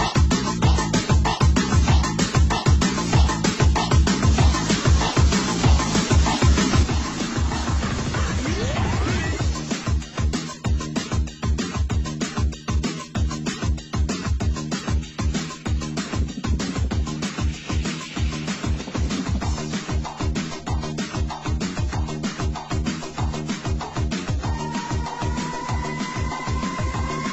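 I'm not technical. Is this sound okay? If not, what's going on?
No. From about 6.83 seconds to the end, the sound suddenly gets noticeably quieter. This is one channel dropping out: one of the two stereo sides likely cut off, so only half the signal remains.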